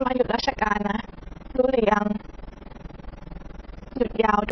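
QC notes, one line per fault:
Throughout, AAC compression: the speech is dull and smeared, with a lowered top end and a warbly, fizzy texture on sibilants and held sounds. This is likely a low-rate AAC-LC encode, around 16 kbps, cutting the top and starving the remaining bands.
Throughout, overlap-add ripple: the level pumps up and down about 20 times a second, swinging by about 60 dB, giving a rough flutter. Frames were rejoined with an overlap that does not sum to constant gain, so the level rises and falls once a frame.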